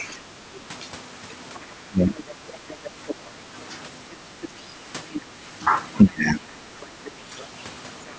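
Right from the start, a second voice sits under the speech until about 3.14 s, roughly 20 dB down. That's other side's voice leaking through, likely the far end playing on a loudspeaker with the echo canceller leaving some of it in the mic. It's back, a bit louder at around 15 dB down, from 4.11 to 5.21 s, and again from 6.82 to 8.13 s, fainter at around 25 dB down.

Overlapping that, the main talker keeps getting ducked. It's speech suppressed in double talk, likely the canceller turning everything down while both sides talk at once. There's a dip of about 20 dB at 0.21 to 0.33 s and a deeper one of about 25 dB at 1.88 to 2.22 s. A shallow, brief drop of about 10 dB comes at 3.31 to 3.37 s, then the longest, around half a second at about 25 dB, from 6.04 to 6.57 s.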